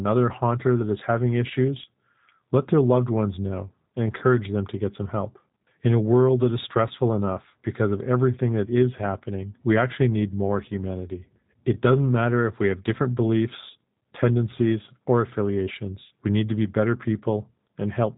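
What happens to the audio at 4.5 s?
At 4.5 s the speech carries G.729 codec damage, which runs through the whole clip rather than starting there. The codec rebuilds each 10 ms frame from a vocal tract filter, a pitch predictor and a few pulses, and the result fits an 8 kbit/s G.729A stream. The damage is plainly audible: the speech sounds rough and synthetic, and nothing above about 3.8 kHz remains, giving a narrow, telephone-like band.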